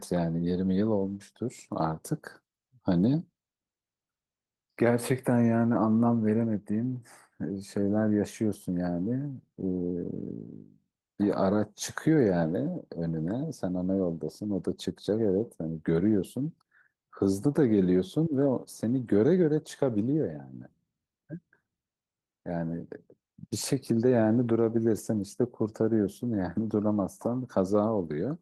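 No technical faults can be heard in this speech clip.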